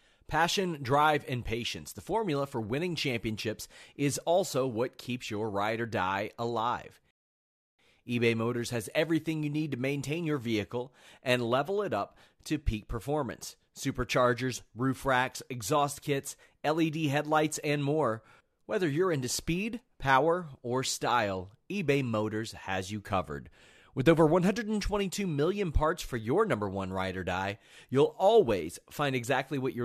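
At about 7.11 s the speech just stops dead, and nothing comes back until 7.79 s. That's a rebuffering stall: the player drained its store of downloaded audio and had to sit and wait for more to arrive. When it picks up again, it carries on from exactly the point where it froze, so nothing is skipped. You just get roughly 0.68 s of dead air added into the middle of the talking.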